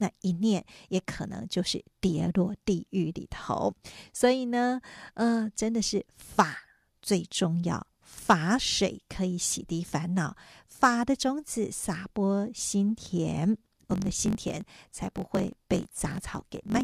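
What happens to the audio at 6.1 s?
Nothing goes wrong at 6.1 s; the speech carries on intact through that moment, with no dropout, click, distortion or other fault to be heard.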